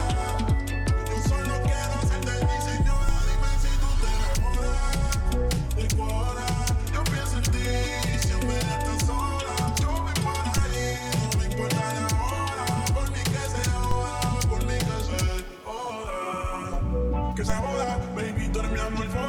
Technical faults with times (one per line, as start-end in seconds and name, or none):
3.09 DC step
10.58 DC step
13.91 DC step
17.50 DC step